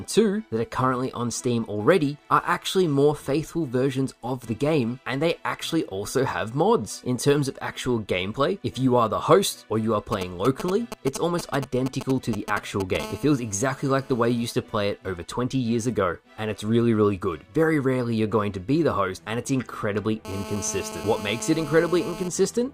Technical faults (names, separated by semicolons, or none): GSM signalling bursts; GSM phone buzz